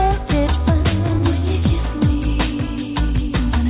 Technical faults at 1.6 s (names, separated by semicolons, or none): repeated packet loss (robotic sound)